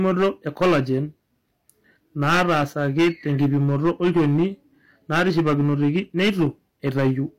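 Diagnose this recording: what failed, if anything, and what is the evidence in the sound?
Hard clipping throughout the speech: overdriven about 15 dB at the converter or gain stage, some 7 percent of samples flatten, adding harsh fuzzy harmonics.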